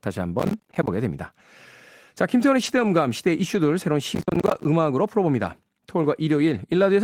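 From 0.40 to 0.88 s the speech breaks into a gritty, crackling tear: processor overload crackle. The processor is falling behind and repeatedly missing its deadlines. Each missed buffer plays as a short hole of silence with hard edges, and a couple of dozen of these in a row fuse into the crackle. The pattern fits buffers of around 10 ms.

From 2.63 to 2.89 s the speech turns rough and grainy for a moment without going silent. This is a lost packet rebuilt from error correction. About 140 ms of audio, which fits seven 20 ms packets, went missing. Each was replaced by the low-bitrate backup copy carried in the next packet, so nothing drops out, but those frames sound coarser and noisier.

A brief 20 ms rough patch at 3.57–3.59 s is a single packet rebuilt the same way.

From 4.15 to 4.65 s the processor overload crackle returns, longer and denser. About 30 of the roughly 10 ms buffers are missed and held as silence, so the tearing lasts about half a second before the load eases.

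At 5.39 s another single lost packet is rebuilt from error correction, heard as a very short grainy blip.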